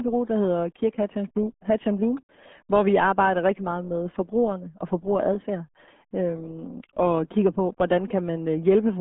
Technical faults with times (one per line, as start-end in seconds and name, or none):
0.00-9.01 RealAudio 14.4 codec